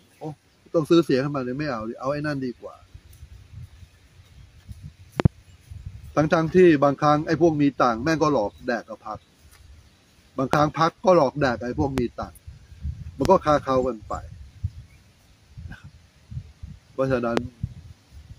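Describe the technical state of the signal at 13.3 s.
At 13.25 to 13.28 s a single loud pop sits on top of the sound, a sharp click-thump roughly 20 dB above the surrounding level, while the sound continues beneath it. The likely cause is a sudden voltage step, as from a plug, switch or static discharge, shaped by the following circuitry. On the waveform it shows as a tall, narrow spike; on a spectrogram, as a thin vertical stripe spanning the full frequency range.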